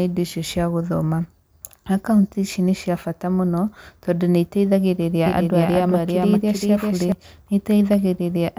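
Likely a second, slower capture path: from 5.26 to 7.12 s, after "tondũ nĩiteithagĩrĩria", a doubled audio track repeats the speech about 0.4 s later, about 5 dB quieter, with abrupt edges.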